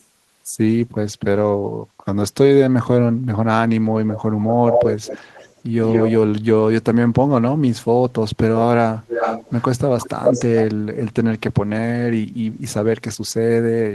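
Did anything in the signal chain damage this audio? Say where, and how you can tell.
Yes. An echo leak is audible at 4.42–5.61 s, 5.85–6.12 s, 9.07–9.63 s and 10.0–10.63 s. A discrete copy of the speech trails by 173 ms, then 333 ms, at near-speech level. That fixed lag rather than a smooth decaying tail rules out room reverberation and points to call processing, likely a far-end echo canceller passing loudspeaker pickup back.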